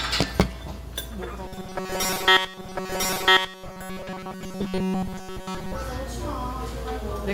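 From 1.46 to 5.76 s a robotic sound from repeated short buffers imposes a rigid 188 Hz metallic buzz, likely from roughly 5.3 ms fragments looped over most of the audio. At 2.57 s the stream segment repeats: a full second replays after a small blip, adding time rather than buzzing.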